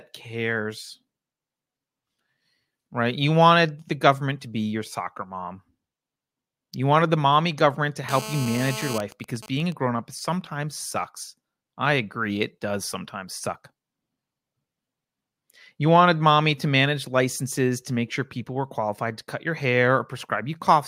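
A speech clip in which, right after "the mommy government to", a hard, raspy GSM phone buzz runs from 8.09 to 8.97 s at 217 Hz, about 10 dB below the speech, showing as dense evenly spaced harmonic lines on a spectrogram. It then breaks into GSM signalling bursts until 9.73 s, even ticks with a longer buzz twice a second well below the speech that appear as clustered vertical stripes and spiky waveform groups, just before "grown up sometimes sucks".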